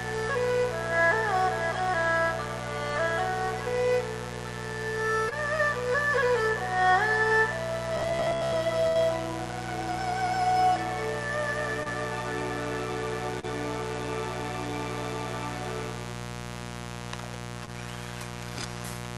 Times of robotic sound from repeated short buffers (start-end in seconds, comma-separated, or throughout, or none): 7.97-8.55